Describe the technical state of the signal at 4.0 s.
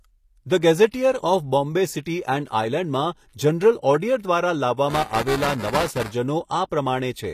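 At 4.0 s the speech carries codec damage that is plainly audible and runs through the whole clip, likely HE-AAC compression at a low bitrate around 24 kbps. The treble is rebuilt by copying lower bands upward, so it extends to 14.9 kHz yet its harmonics misalign, unlike a plain low-pass cut.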